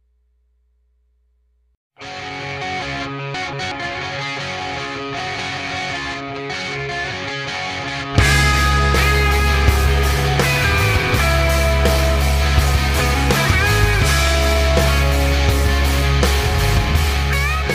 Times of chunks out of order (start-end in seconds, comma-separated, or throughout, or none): 3.34-3.72, 5.20-5.57